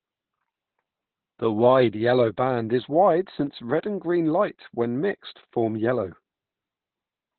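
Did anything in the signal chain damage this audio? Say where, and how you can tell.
Yes. The damage is at the codec stage: Opus voice compression throughout. Nothing survives above 4.3 kHz, so the speech is narrowband and muffled. It sounds hoarse and slightly robotic. The coarse excitation and narrow band point to SILK coding at roughly 8 kbps.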